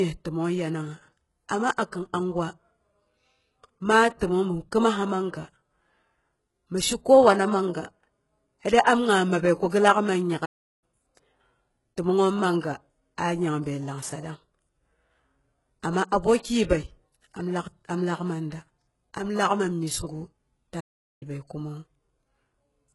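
Throughout, the speech has the gritty, metallic sibilance of HE-AAC compression at likely a very low bitrate around 12 kbps. Replicated treble shows on a spectrogram as a hard ceiling with smeared, copied bands. At 9.69 s, pre-echo puts about 35 ms of hiss before "gi laak", visible as broadband noise ahead of the attack. The same thing happens at 12.60 s, spreading about 31 ms. From 10.45 to 10.84 s the sound cuts out for 0.37 s, a playback stall where the player likely ran short of data, leaving a flat, empty gap in the waveform. A second stall, 0.41 s long, runs from 20.80 to 21.23 s.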